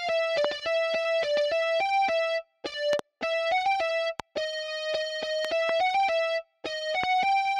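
Loud pops land on the audio at 0.45, 4.2 and 7.04 s, with double pops at 2.93–3.01 and 5.45–5.71 s. Each peaks well above the sound. Likely cause: voltage spikes from switching or static.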